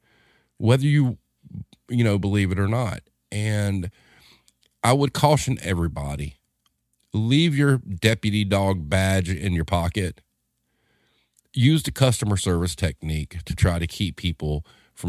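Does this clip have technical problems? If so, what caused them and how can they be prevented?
No, there are no technical problems in this clip.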